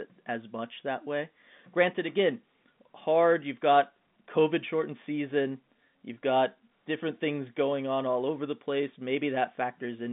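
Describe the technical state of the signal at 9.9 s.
At 9.9 s the audio is intact, with the speech carried through ordinary G.711 telephone coding whose band stops short of about 3.7 kHz.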